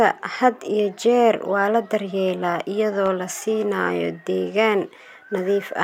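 At 3.06 to 3.08 s, just before "la siinayo deegaan", there's a single loud pop, a sharp click that peaks a few dB above the speech, which keeps going underneath. It's likely a sudden voltage spike, say from a switch, static or a driver glitch.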